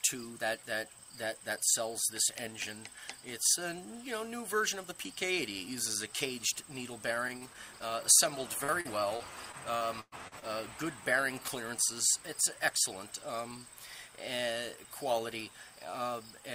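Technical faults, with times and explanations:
7.15–7.83 s, repeated packet loss (robotic sound): five brief holes break the sound. About 86 ms is patched by stretching the previous sound, and 40 ms drops out entirely. The repeated patching gives a choppy texture across about 13% of the stretch.
8.64–10.45 s, repeated packet loss (robotic sound): a heavier run with eight gaps, the longest 110 ms. About 337 ms is concealed by repeating earlier sound and 320 ms is lost outright, so the audio turns robotic and fragmented.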